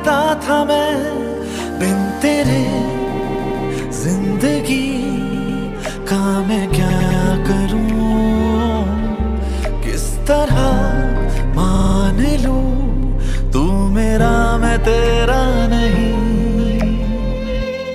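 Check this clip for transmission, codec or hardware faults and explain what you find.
The clip has four stutters, each caused by repeated frames. At 3.18 to 3.65 s, a 156.7 ms stretch plays three extra times. At 5.32 to 5.63 s, a block of the same length repeats twice more. At 6.89 to 7.20 s, a 104.5 ms block plays three extra times. At 11.75 to 11.95 s, a 52.2 ms block plays four extra times. Each sounds like a skipping record. The cause is a short run of compressed frames sent or written more than once. The block lengths fit frames of about 26 ms. The decoder faithfully replays them, so each stutter lengthens the audio by the repeated time, between 209 and 470 ms.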